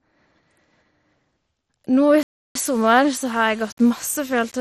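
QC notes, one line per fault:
Throughout: MP2 compression. The sound is dull, with gurgling, granular distortion, likely from Layer II coding at a low rate, around 56 kbps. Starved upper sub-bands switch off and flicker. On a spectrogram, the upper bands show blocky on-off patches.
2.23–2.55 s: playback stall. The audio halts mid-flow for about 0.32 s and then resumes, likely because the player ran short of data or its thread was blocked. The waveform shows a flat, near-silent line across the gap, and the spectrogram shows a clean blank vertical band.
2.67–4.61 s: low bit depth without dither. Quiet passages turn gritty and sputter, with error tracking the signal at roughly 25 dB below it. This points to about 6-bit values that were likely rounded without dither. On a zoomed waveform, the samples sit on visible staircase steps, and low-level stretches collapse to silence.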